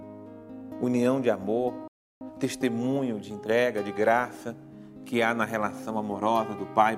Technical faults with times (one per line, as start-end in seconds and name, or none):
1.88-2.21 playback stall